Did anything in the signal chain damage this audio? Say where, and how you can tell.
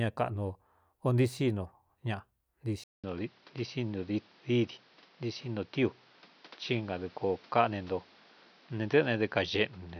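Yes: after a 0.2 s gap at 2.84 s, speech tops out at 6.1 kHz over a new faint noise floor, likely from the input switching to a poorer device.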